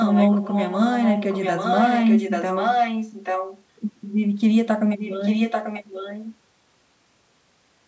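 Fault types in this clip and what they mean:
Echo leak: there's a delayed copy of the speech trailing the original by 840 ms. It's fairly strong from the start to 3.63 s and quieter from 4.97 to 6.36 s, likely the far end's echo canceller letting loudspeaker pickup leak back.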